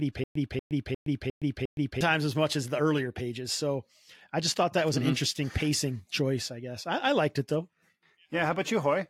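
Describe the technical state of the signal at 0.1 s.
At 0.1 s a stutter with silent gaps is under way, running to 2.01 s, before "times as much as". A 237 ms burst repeats five times with 118 ms of digital silence between. It is likely a stalled stream replaying one fragment, and unlike dropouts, identical audio returns evenly.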